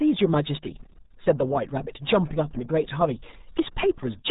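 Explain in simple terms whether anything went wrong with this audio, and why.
Throughout the speech, the RealAudio 14.4 codec cuts everything above 3.8 kHz. Heavy gargly smearing, not just muffling, separates it from plain filtering.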